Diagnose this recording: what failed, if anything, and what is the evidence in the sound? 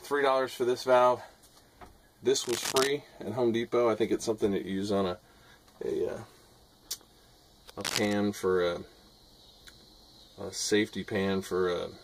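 Two bursts of cable scratch noise point to the analogue wiring. From 2.44 to 2.90 s and again from 7.81 to 8.13 s, a dense, ragged scratching rides over the sound, only a few dB below it. The cause is likely a worn cable, connector or control being moved. The contact resistance flickers as it shifts, and that jitter lands in the signal as uneven rustle.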